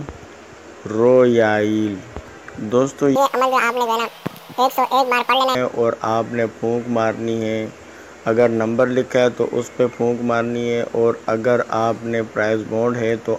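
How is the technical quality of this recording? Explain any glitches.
One clear glitch: a section at the wrong speed. From 3.16 to 5.55 s the audio runs at double speed, rising nearly an octave, likely from a wrong clock. Tempo and pitch jump together, unlike a pure pitch shift.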